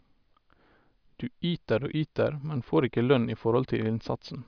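Nothing in the recording stood out as a technical problem on listening.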